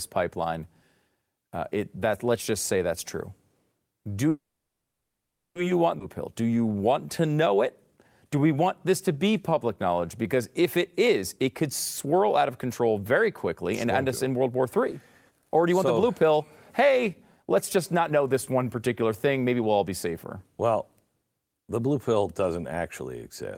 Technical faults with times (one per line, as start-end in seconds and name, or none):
4.29-5.57 call audio freeze
5.99-6.02 skip ahead
6.41-7.56 jitter buffer slow-down
8.36-10.62 jitter buffer slow-down
10.76-11.64 jitter buffer speed-up
12.05-13.22 jitter buffer speed-up
13.72-16.38 jitter buffer speed-up
16.80-20.07 jitter buffer speed-up